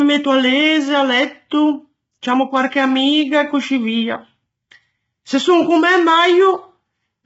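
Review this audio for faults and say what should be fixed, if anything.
Heavy codec damage throughout: grainy, rough speech with noise between harmonics and nothing above 7.7 kHz, likely low-delay AAC compression at a bitrate near 16 kbps. Raise the bitrate or use a wider-band codec setting.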